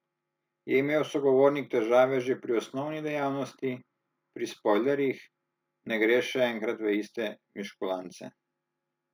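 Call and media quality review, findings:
Imaging from linear upsampling, throughout the speech: top end dulled, faint metallic shimmer on sibilants. Mirrored band 8–16 kHz, roughly 40 dB down. Fits a 16 kHz source linearly interpolated to 44.1 kHz. Unlike clean band-limiting, energy persists above 8 kHz.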